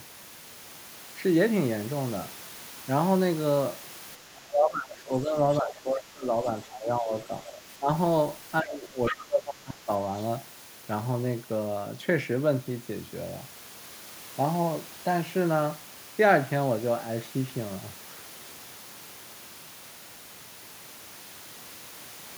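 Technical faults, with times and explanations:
4.17–5.37 s, 5.61–6.47 s, 6.65–7.33 s, 7.79–7.89 s and 8.62–9.89 s, speech suppressed in double talk: the speech repeatedly ducks, by roughly 10 to 25 dB at the deepest, deepest in the first and last stretches. This is likely an echo canceller that cannot separate the talker from the loudspeaker echo while both sides speak, so it turns both down.
5.53–5.57 s and 9.06–9.14 s, other side's voice leaking through: two brief scraps of a second voice come through. The first is faint, about 25 dB under the speech, and the second is much more prominent, about 10 dB under. This is likely loudspeaker echo that the canceller failed to remove from the microphone.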